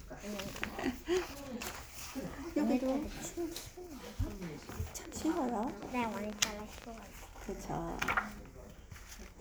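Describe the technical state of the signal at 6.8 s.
At 6.8 s you're right at the tail of a train of clicks that runs from about 5.05 s to 6.85 s. It's roughly twenty sharp, similar-shaped pulses arriving at about 11.8 per second, but unevenly spaced, so it sounds like a ragged ticking or popping laid over the audio. The peaks jump around 10 dB above the surrounding signal. The likely culprit is outside interference or a faulty connection or power supply.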